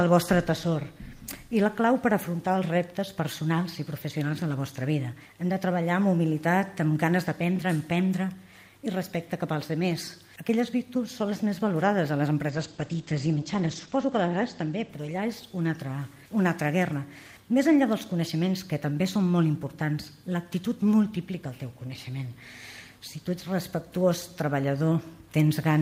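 At 12.5 s a call bitrate drop sets in and lasts until about 16.09 s. The audio bandwidth narrows from 20 kHz to 8 kHz, so the top end disappears and the sound turns muffled and coarse, with a rough, watery texture at its worst for about 1.48 s. This fits the encoder being forced from roughly 40 kbps down to about 12 kbps after the bandwidth estimate fell, before the bitrate recovers.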